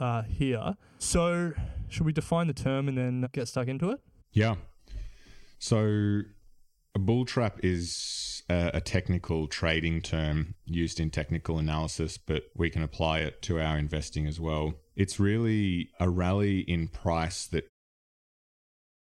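Nothing is technically wrong with this speech recording; it simply fades out smoothly, beginning around 17.5 seconds and finishing by 17.7 seconds.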